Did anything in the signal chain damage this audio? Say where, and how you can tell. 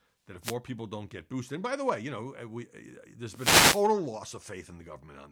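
Yes, wireless microphone noise hits at 0.41–0.56 s and 3.32–3.88 s: static swishes over the speech as the FM radio link fades and receiver noise surfaces.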